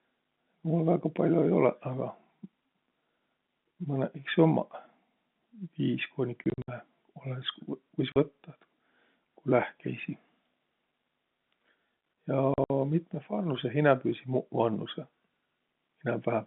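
At 4.24 s a single-sample bit error spike gives one sharp, broadband tick: a flipped bit briefly threw the sample value off by a power of two. From 6.44 to 6.68 s, just after "viis kooniq", then 8.12 to 8.16 s and 12.54 to 12.7 s, packet loss filled with silence punches hard-edged holes into the telephone-band speech. Total losses are 140, 40 and 100 ms, with runs up to 60 ms, all multiples of 20 ms, which fits 20 ms packets.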